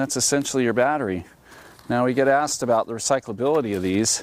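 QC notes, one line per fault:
No faults heard; nothing to log.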